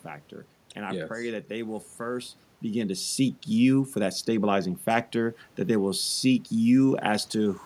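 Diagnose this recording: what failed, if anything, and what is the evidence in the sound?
Nothing in the signal chain failed: the steady background noise is the room itself picked up by the microphone, and the change in level at around two and a half seconds is the talker moving relative to the microphone rather than any gain or processing change.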